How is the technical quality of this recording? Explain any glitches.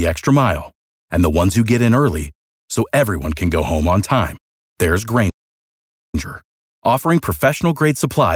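The recording has one clear glitch, a playback stall in the speech. At 5.30 s, just after "home on time there's", the audio drops out for about 0.84 s and resumes at 6.15 s. The player likely ran out of buffered data or had its thread blocked. On a waveform this is a flat line with no decay; a spectrogram shows a sharp vertical cut to blank across all frequencies.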